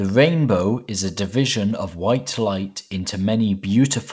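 Nothing stood out on listening to this speech recording, which came through a call path running the G.722 codec.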